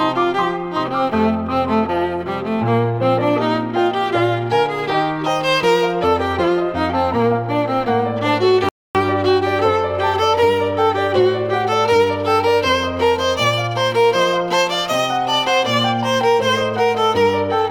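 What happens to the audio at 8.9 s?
At 8.69 s the audio drops into a rebuffering stall lasting about 0.26 s, until 8.95 s. Playback ran dry and paused for more data, then resumes exactly where it stopped, adding time without losing sound. The waveform shows a flat gap, the spectrogram a blank vertical band.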